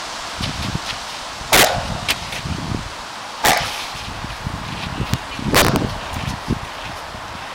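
Integer overflow: loud peaks pushed past the largest integer wrap to the opposite sign instead of being limited, so each flips across the full range. Violent cracks, far harsher than clipping, hit at 1.53–1.65 s (about 9 dB over), 2.11 s (about 4 dB), 3.45–3.58 s (about 6 dB), 5.14 s (just at the limit) and 5.55–5.76 s (about 9 dB).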